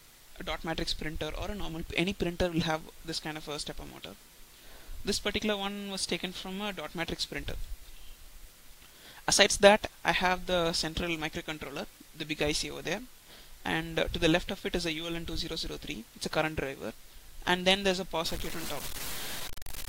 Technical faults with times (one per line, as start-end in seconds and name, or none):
18.26-19.89 low bit depth without dither